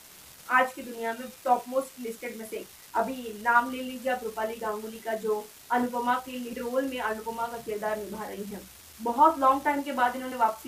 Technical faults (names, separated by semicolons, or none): unreliable data bit; compressed frames skipped